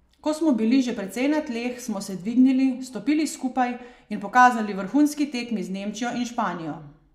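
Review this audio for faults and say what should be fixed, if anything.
Nothing to fix: no technical faults are audible anywhere in the speech.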